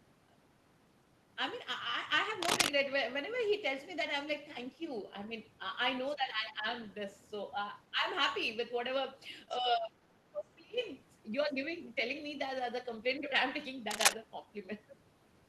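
At 2.41 to 2.71 s, a burst of cable scratch noise rides about 5 dB above the speech. Its dense, uneven crackle, unlike a clean click, likely comes from a worn connector being moved. At 6.09 s, the other side's voice leaking through appears as a faint scrap, about 35 dB under the speech, probably an echo the canceller missed. Speech suppressed in double talk follows at 6.15 to 6.66, 7.91 to 8.04, 9.6 to 10.01 and 10.29 to 10.79 s. The voice dips by up to roughly 25 dB, likely because the canceller ducked both talkers. These are level drops, not added sounds. Cable scratch noise returns at 13.91 to 14.14 s, louder than the speech.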